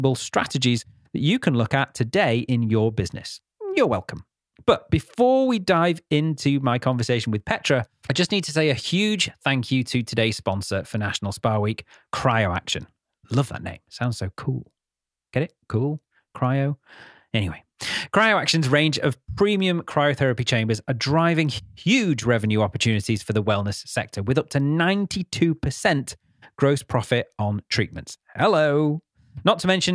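No technical faults can be heard anywhere in the speech recording. There is nothing here that needs a timestamp or an explanation.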